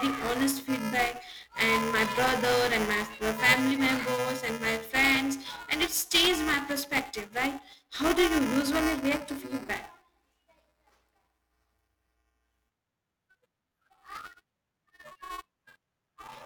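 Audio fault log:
throughout: buffer tearing. The writing program and the playback hardware have slipped and cross inside each period, so roughly a tenth of every buffer replays audio around 10 ms stale, with hard joins either side. This gives a continuous robotic 375 Hz buzz under the speech, which fits a 128-sample buffer.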